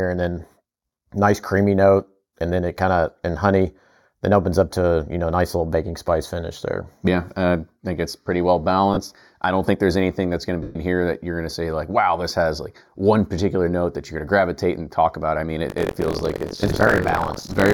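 Throughout, one channel runs roughly 0.2 ms behind the other before the two are folded to mono, which is channel delay (comb filtering). Components common to both channels cancel at evenly spaced frequencies, with the first notch near 3 kHz and more repeating above it. The fixed gaps in the upper spectrum leave the speech hollow and phasey, dulling its presence and sibilance range for the whole clip.

At 8.94 to 8.97 s, between "think it's pretty well" and "I don't think there's", lost LE Audio frames take out about 30 ms. The LC3 decoder fills the gap by reusing the last good spectrum with randomised signs, so that short moment becomes a brief noisy smear. A longer loss follows at 10.63 to 10.75 s, between "anything that's going to" and "here that you're going". Here about 127.5 ms is concealed. The smear fades progressively as concealment continues and sinks towards silence before decoding resumes.

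From 15.68 s to the end, after "talk about I mean", the software writing the playback ring buffer and the hardware reading it have slipped out of step, producing buffer tearing. Within every period, roughly a fifth of the buffer holds audio around 70 ms stale, with hard joins on both sides. This gives a rough, robotic buzz at 46.9 Hz, which fits a 1024-sample buffer, and it rides on the speech whenever sound is present.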